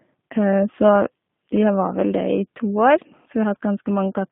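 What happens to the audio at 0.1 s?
At 0.1 s the speech already carries the G.729 codec damage that runs through the whole clip. Each 10 ms frame is rebuilt from a vocal tract filter, a pitch predictor and a few pulses, so the speech is plainly rough and synthetic, which fits a G.729A stream at 8 kbit/s. Only roughly 150 Hz to 3.6 kHz survives. A simple low-pass filter would leave the sound dull but smooth, whereas here the buzzy, coarse texture shows the sound has been resynthesised.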